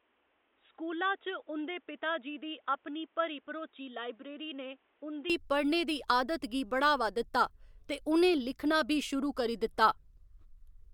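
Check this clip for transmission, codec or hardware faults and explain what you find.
One fault: from 0 to 5.30 s the speech is dull and boxy, cut off above 3.8 kHz, about 10 dB quieter, with its own background noise roughly 35 dB down. It clears with no gap just before "पढ़ने दी आदत गी". The likely cause is an input switched to a poorer device. Unlike a codec bandwidth drop, the level and noise floor change along with the bandwidth.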